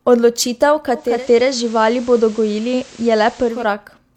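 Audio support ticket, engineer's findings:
Digital radio blending to analogue, 0.92–3.76 s. Receiver dropped to FM: 386 ms cross-fade, hiss about 25 dB under signal, level unchanged. Distinct from codec band-limiting: fades in and out, brings hiss.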